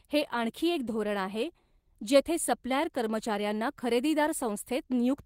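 Nothing in this speech recording stands out as a technical fault, so there's nothing to flag here.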